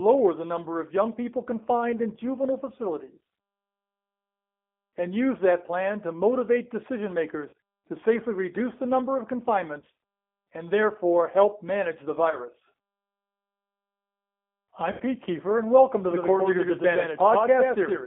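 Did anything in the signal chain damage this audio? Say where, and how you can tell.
Yes. From start to finish the sound is narrow and slightly rough and synthetic, confined to roughly 250 Hz to 3.6 kHz. That is the G.729 codec at the codec stage. Its 8 kbit/s model rebuilds the signal from a filter, pitch predictor and a few pulses per frame, so the damage is plainly audible.

Network stage: short, fading smears occur at 7.49–7.53 s (after "plan to motivate decision", before "to safely reduce the"), 9.80–9.82 s (after "reduce the number of"), 12.30–12.37 s (after "therefore help manage the") and 14.92–15.03 s. This is VoIP packet loss concealed by the speech codec. The decoder stretched its last pitch and filter over 40, 20, 20 and 80 ms of missing audio, which fits lost 20 ms packets, and the sound stays weakened briefly afterwards.

From 16.11 s to the end, a full-band copy of the same sound trails the original by about a tenth of a second, at about 5 dB lower. 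It has no room decay and cuts in abruptly. This is a doubled audio track, likely from a second, slower capture path or an edit holding two offset copies.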